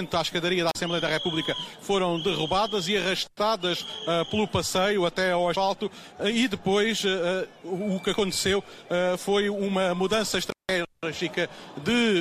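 At 0.69 s and again at 10.46 s the sound drops out from an intermittent contact, a loose cable or plug briefly losing connection. The first gap lasts about 37 ms, the second about 166 ms. Each is framed by crackle as the contact breaks and remakes, with only faint hiss during the gap. On a waveform the signal collapses to near-flat; a spectrogram shows a dark vertical band bracketed by thin broadband clicks.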